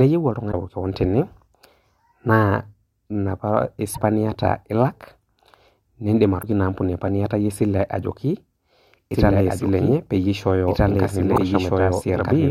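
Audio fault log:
0.49–0.54, 3.91–3.98, 6.39–6.44 and 11.33–11.38 s, damaged data in a compressed stream: brief glitches as the decoder chokes on bad frames and loses sync.
9.14 s to the end, doubled audio track: a dry full-band copy, roughly as loud, trails about a second and a half behind and cuts in abruptly, likely an out-of-step edit.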